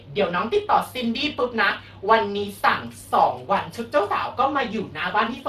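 Speex codec damage runs throughout: the CELP coder's limited excitation bits leave the speech plainly hoarse and noisy, consistent with roughly 22 kbps, with nothing above 15.3 kHz.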